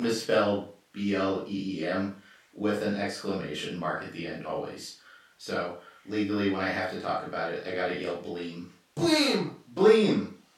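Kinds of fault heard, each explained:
No faults of any kind turn up in this speech recording. Nothing calls for a name or an explanation here.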